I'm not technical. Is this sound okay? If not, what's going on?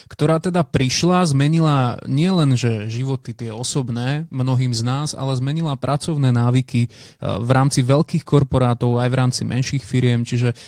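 Yes, no faults heard.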